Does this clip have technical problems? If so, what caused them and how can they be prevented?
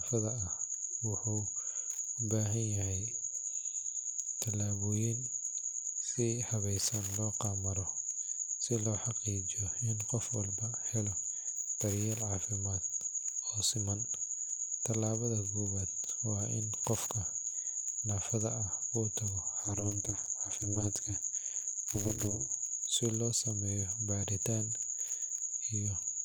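Yes. Overlap-add ripple runs from 19.63 to 22.55 s, just before "si loo". The speech was cut into windowed frames and rejoined with an overlap whose gains don't sum to a constant, so the level swings by about 60 dB once per frame, producing a metallic buzz at around 200 Hz. Prevent it by pairing the window shape and hop size so that overlapping windows add up to a constant gain.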